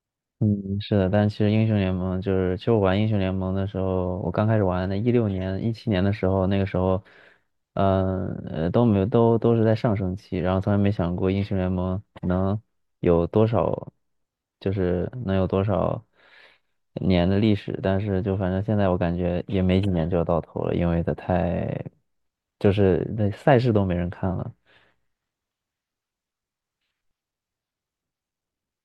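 No technical faults turn up anywhere in the recording, so there is nothing to describe in time order.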